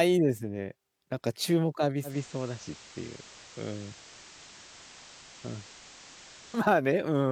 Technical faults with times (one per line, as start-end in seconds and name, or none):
2.03-6.67 digital radio blending to analogue